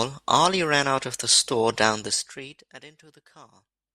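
Zipper noise from 1.87 to 2.83 s: speech drops about 25 dB in unsmoothed 2 dB steps, roughly fifteen per second, each one clicking.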